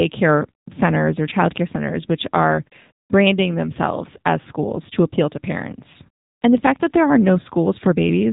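From start to finish the speech sounds boxed-in and buzzy, with a synthetic edge and nothing above 3.8 kHz. That is AMR narrowband mobile codec damage: 8 kHz sampling caps the band, and the plainly audible coding artefacts fit a low rate near 7.4 kbps.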